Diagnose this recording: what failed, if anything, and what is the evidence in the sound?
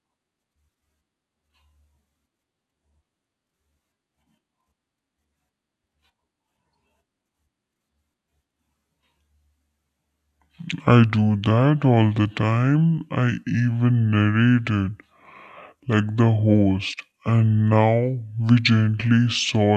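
Throughout, speech drags at two-thirds speed, 7 semitones low: a wrong sample rate at playback, fitting 48 kHz audio played at 32 kHz.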